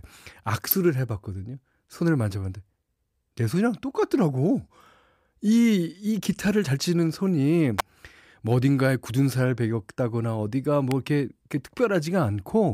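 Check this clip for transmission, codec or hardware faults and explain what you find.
Three brief faults stand out. Sharp snaps sit on top of the speech at 0.71, 7.79 and 10.91 s, the last one a little quieter than the other two. These are electrical switching spikes: a nearby switch, motor or static discharge likely arced for an instant, and the audio line picked up each burst.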